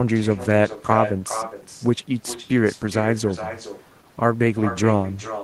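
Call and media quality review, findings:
Echo with no canceller, throughout. Far end plays the call on a loudspeaker, its mic recaptures it, and no echo cancellation removes the return. Result: every phrase of speech repeated around 0.4 s later, about 11 dB below the original, thinner. Probable component: far-end device's acoustic echo canceller, missing or disabled.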